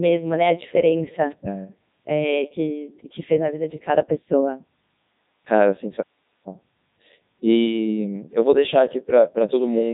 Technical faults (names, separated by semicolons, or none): Codec 2 vocoder